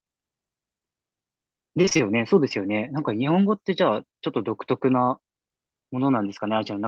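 From 1.81 to 2.01 s the speech breaks up with repeated packet loss (robotic sound). Around five short holes fall in this fifth of a second, the longest about 23 ms, and each is patched by stretching the sound just before it, so roughly half the span is synthetic fill. Unlike a single dropout, which leaves one clean gap or click, the holes and patches alternate rapidly, giving a choppy texture with fragments missing.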